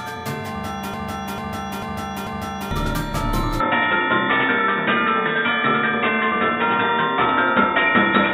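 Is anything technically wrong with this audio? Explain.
Yes, two faults can be heard.

From 0.94 to 2.71 s there is a broken-record loop: a 0.44 s fragment repeats exactly four times, back to back. The playback or stream likely stalled and kept resending its last buffered piece, so the audio for that stretch is lost.

From 3.60 s to the end, the sound abruptly turns dull and boxy, with nothing above 3.8 kHz. The level shifts by about 5 dB, and a new background noise appears roughly 50 dB below the signal. There is no gap at the switch. This is likely the input switched to a poorer device, such as a headset's call profile.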